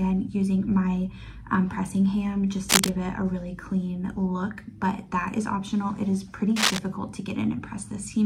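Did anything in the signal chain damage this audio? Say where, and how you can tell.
Yes, at the analogue wiring stage: cable scratch noise. Ragged crackle covers the sound at 2.69–2.90 s, roughly 5 dB above it, and at 6.56–6.80 s, about level with it. The likely cause is a moved, worn connector with flickering contact resistance. A spectrogram shows broadband smears, and the waveform shows jagged, irregular spikes.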